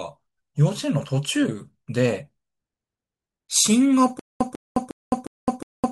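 A speech clip that breaks down at 4.19 s into a stutter with silent gaps, running to the end: a burst of about 146 ms repeats five times, each followed by roughly 212 ms of dead digital silence, so the same fragment returns every 358 ms at a mechanical, even pace. The likely cause is a playback or stream stall, where each retry replays the last buffered fragment and then runs dry, so the speech that belonged after 4.19 s is lost.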